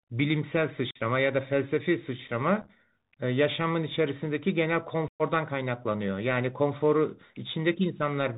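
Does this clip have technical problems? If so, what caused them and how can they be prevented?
Yes. The whole speech clip carries the sound of a Bluetooth CVSD headset codec. The 64 kbit/s one-bit delta coding, stepping up or down each sample with an adaptive step size, leaves nothing above 4 kHz. Fast, loud high sounds outrun the step and distort, s sounds turn scratchy, and a granular hiss sits beneath the speech. That grainy hiss and slope distortion set it apart from a plain low-pass filter or a modern wideband codec. Switching the headset to a wideband profile or using a wired microphone would avoid it.

Unconcealed Bluetooth headset packet loss cuts three holes. From 0.91 to 0.98 s about 45 ms of audio drops out. Around 2.62 to 2.70 s the losses are scattered over 75 ms, none longer than 7.5 ms, so that stretch sounds like crackle and chopping rather than one gap. From 5.08 to 5.22 s about 116 ms is lost. 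The gap length points to roughly thirty lost packets. The gaps have abrupt edges and a brief quieter recovery. Nothing is smoothed over, which is how this differs from concealed loss. Keeping the headset close to the phone and away from Wi-Fi congestion would prevent it.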